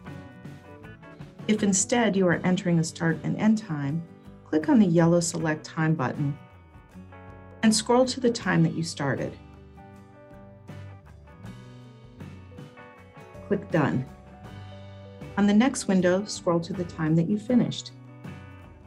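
No technical faults can be heard anywhere in the audio.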